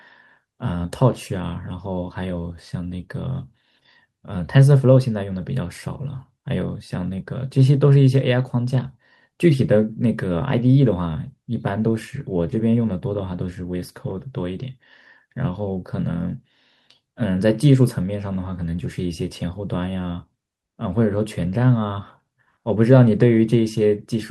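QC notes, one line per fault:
No fault found in this clip; nothing to log in the QC notes.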